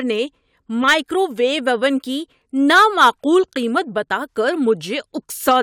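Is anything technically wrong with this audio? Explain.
No, nothing technically wrong stands out in this speech recording; there's nothing here that needs fixing.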